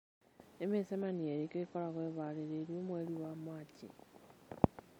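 An adaptive stream at a lower bitrate runs from 1.01 s to 3.01 s in this speech recording. The stream switched to a cheaper version while the connection slowed, then switched back. For those two seconds the treble vanishes above about 8.3 kHz and the encoding artefacts thicken, which fits a step down from 128 kbit/s MP3 to 32 kbit/s MP3. The quality change is abrupt at both ends, with no gap in the sound.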